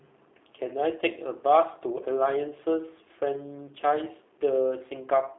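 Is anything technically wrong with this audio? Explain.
Yes. Throughout, the speech sounds thin, slightly rough and synthetic, with nothing above 3.8 kHz and a band of roughly 300 Hz to 3.7 kHz. This is plainly audible G.729 codec damage: each 10 ms frame is rebuilt from a vocal tract filter, a pitch predictor and a few pulses, consistent with an 8 kbit/s VoIP stream.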